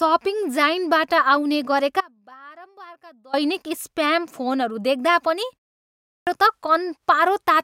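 From 2.01 to 3.33 s the speech suffers an audio dropout to a faint residue. For about 1.3 s the signal falls abruptly to a weak leak, roughly 25 dB below normal, likely because the source was lost while the path stayed live. On a spectrogram this shows as a sharp-edged band of much fainter energy.

At 6.04 s, after a 0.54 s pause, there is a clipped start after a pause. The output device, asleep during the silence, takes about 0.23 s to wake, swallowing the onset. The waveform jumps from flat silence straight into full-level speech, with no rising edge.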